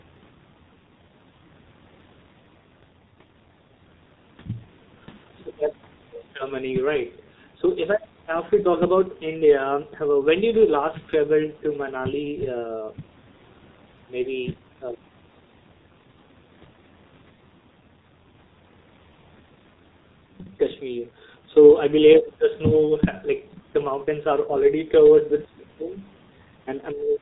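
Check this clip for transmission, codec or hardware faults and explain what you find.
One codec fault runs through the whole speech recording.

G.723.1 codec, throughout: heavy low-rate coding in 30 ms frames, consistent with roughly 6.3 kbit/s, cuts everything above 4 kHz, leaving speech muffled, hoarse and smeared at consonants.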